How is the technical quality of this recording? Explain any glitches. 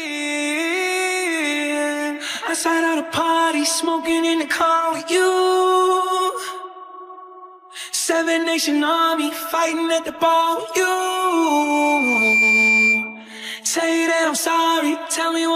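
Not great: from 10.98 to 13.30 s there's loudspeaker feedback squeal. The mic is hearing its own speaker, so a 2.4 kHz tone swells over about a second and a half to roughly 5 dB above the sound.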